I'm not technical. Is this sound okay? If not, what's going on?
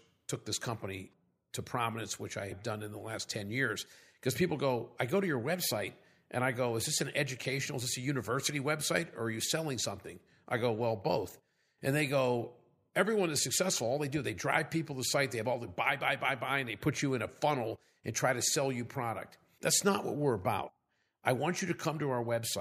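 Yes, the recording is fine; nothing in it needs fixing.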